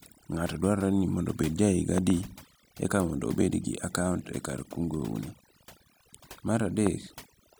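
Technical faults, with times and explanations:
throughout, overdone noise removal: the speech sits over a near-silent background with twinkling specks, because aggressive noise reduction shut off frequency bands along with quieter parts of the voice.
1.98–2.12 s and 6.87 s, loud pop: two sharp pops in quick succession, then a single one, each about 15 dB above the speech, which continues underneath, likely from a voltage spike such as a plug, switch or static discharge.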